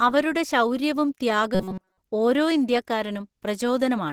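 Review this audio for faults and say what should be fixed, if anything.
Throughout the speech there is a muffled, hoarse, grainy quality, plainly audible as roughness on voiced sounds. The likely cause is Opus compression in its hybrid speech mode at a low rate, which fits about 16 kbps. Fullband energy is kept, but fine detail is replaced by coarse, noisy fill. Encoding at a higher bitrate would keep Opus in its cleaner music mode and avoid this.

From 1.55 to 1.97 s the voice turns into a rigid, metallic buzz at 188 Hz that only loosely tracks the speech. This is likely robotic sound from repeated short buffers. The playback loops a chunk about 5.3 ms long, which fits a small buffer, while most of the real audio in that span is skipped. A larger jitter buffer and steadier audio delivery would prevent this.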